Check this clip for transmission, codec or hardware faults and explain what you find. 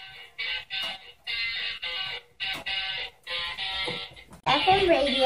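One fault turns up: damaged data in a compressed stream, from 4.40 to 4.47 s. For roughly 70 ms the decoder meets corrupted frames, misreads them and loses sync while it hunts for the next valid frame header. The result is a short chirp, squawk, click or hole breaking into the sound. On a spectrogram it shows as a brief vertical smear of broadband or oddly banded energy or a brief gap, and the waveform shows a small burst of jagged, unrelated samples or a short dropout.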